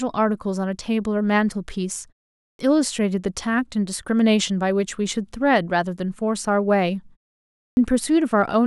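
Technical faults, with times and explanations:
2.44–2.59 s and 7.61–7.77 s, clipped start after a pause: after short gaps of 0.4 and 0.53 s, the output's slow wake-up swallows roughly 150–160 ms, so speech jumps in abruptly.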